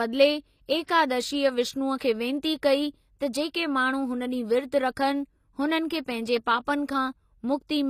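Throughout the speech, the treble has the synthetic quality of HE-AAC compression, likely at a low bitrate around 24 kbps. The upper band is rebuilt from copied lower bands, so sibilants sound gritty and lispy, and nothing remains above 14.9 kHz.

Pre-echo occurs at 0.86–0.88 s and again at 1.98–2.00 s, just before "खे विनती कई". Each time, quantisation noise spread across the transform block leaks about 26 ms ahead of a sharp onset, leaving a brief hiss and a softened attack.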